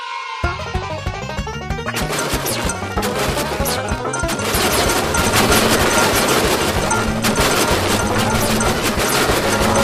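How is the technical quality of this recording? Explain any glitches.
The recording holds steady throughout, with no dropouts, clicks, distortion or other glitches to explain.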